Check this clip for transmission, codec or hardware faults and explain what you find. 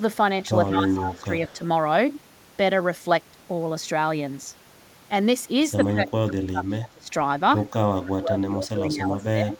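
Two call-path faults are audible in this speech, both tied to echo cancellation.

Speech suppressed in double talk occurs at 0.7–1.3 s, 1.53–1.61 s, 5.89–7.08 s and 7.93–9.59 s. The cause is likely an echo canceller that, with both sides talking, could not separate the near talker from loudspeaker echo and pulled the whole signal down. The speech sags about 10 dB in the first stretch and only slightly at 1.53 s, then drops by about 25 dB, close to cutting out, for roughly a second and then one and a half seconds near the end.

Echo leak appears at 0.91–1.25 s and again at 1.47–1.53 s, a copy of the speech trailing it by 145 ms. A far-end loudspeaker's sound reached its microphone and was likely not fully cancelled, so a residue came back down the line. The first leak sits about 10 dB under the speech, a doubling. The second is a faint scrap about 25 dB down.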